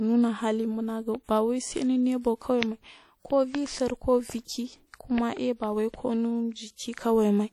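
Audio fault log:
Throughout, WMA compression: the speech carries a plainly audible washy, ringing smear, with a hiss that rises and falls with the signal and spreads around each syllable by tens of milliseconds. This points to a long-block transform codec, likely WMA at a rate that fits roughly 48 kbps. Unlike a simple low-pass or band-limit, the top end still reaches about 20.1 kHz; the damage is smeared quantisation noise and thinned weak detail, not missing treble.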